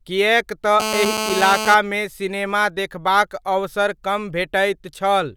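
From 0.80 to 1.75 s, just before "सिनेमा देखबाक अवसर", a GSM phone buzz sits about 4 dB below the speech. Nearby 2G bursts at 217 Hz are rectified into a steady, raspy, harmonic-rich buzz. Unlike mains hum, it isn't pitched at 50 or 60 Hz.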